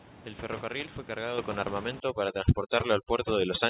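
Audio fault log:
1.38 s and 2.40 s: microphone volume stepped up. The input gain jumps in a single step, by about 7 dB and then about 4 dB, so the sound and the room noise, sitting about 11 dB under it, get louder together and stay there. On the waveform the envelope steps to a higher plateau at each point. On the spectrogram every band brightens at once, up to the 4 kHz ceiling of the call path, with no fade.
2.0 to 3.7 s: overdone noise removal. Noise suppression set too aggressively gates individual frequency bins whenever they drop near its noise estimate. The steady room background collapses to near silence dotted with brief twinkling tones, and the quieter parts of the speech are stripped out with it. A spectrogram shows isolated speckles scattered across the gaps and ragged, hollowed-out speech harmonics. On the waveform the floor between syllables drops to almost flat.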